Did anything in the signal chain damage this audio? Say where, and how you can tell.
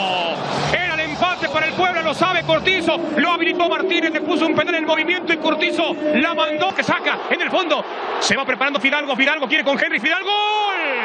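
Yes, repeated frames at the codec or storage stage: brief stutters at 6.47 to 6.49 s and 9.02 to 9.05 s, each replaying about 23.2 ms, which fits a single compressed frame.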